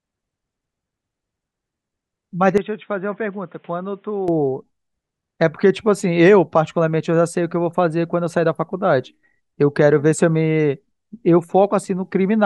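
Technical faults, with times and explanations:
2.58 to 4.28 s, input switched to a poorer device: the speech turns boxy and quieter, by roughly 10 dB, with nothing above 3.8 kHz. A faint new background noise sits well below it. There is no gap at the switch. The likely cause is a narrower-band microphone taking over briefly.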